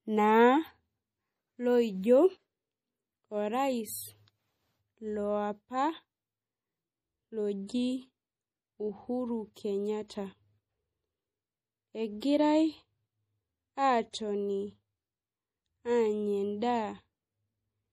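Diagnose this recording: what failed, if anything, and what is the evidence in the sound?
Codec stage: the speech has a watery, swirly edge and nothing above 15.2 kHz, likely MP3 compression starved of bits, sounding like roughly 40 kbps.

Pre-echo, also from the codec: hiss creeps in just before attacks at 9.54–9.56, 10.08–10.10, 12.20 and 14.11–14.14 s, softening each onset.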